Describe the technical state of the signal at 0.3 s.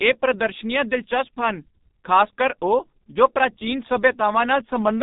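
At 0.3 s the speech sounds muffled and hoarse, with smeared consonants and nothing above 3.8 kHz, as it does throughout the clip. This is heavy G.723.1 codec damage: its 30 ms frames and slowly updated voice model, at what sounds like roughly 6 kbit/s, blur rapid detail.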